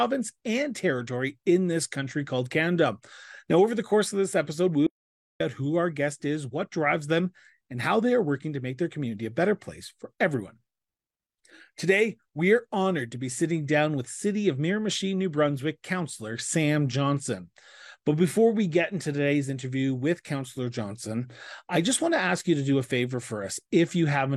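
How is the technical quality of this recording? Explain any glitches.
The recording has one clear glitch. From 4.87 to 5.40 s there is an audio dropout to silence: the speech stops abruptly mid-flow and about 0.54 s of it is simply gone, with no room tone underneath, before the sound resumes just as suddenly. The likely cause is a momentary loss of the input signal while recording continued writing zeros. A waveform shows a flat line there, and a spectrogram shows a hard-edged, blank band.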